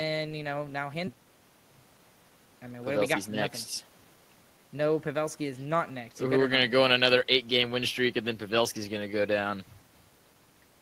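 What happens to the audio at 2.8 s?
A jitter buffer speed-up runs from 2.77 to 3.19 s: with too much audio queued, the receiver repeatedly cuts out short pitch-period slices, about a tenth of a second in total, so the speech plays roughly 120% fast at unchanged pitch and sounds hurried.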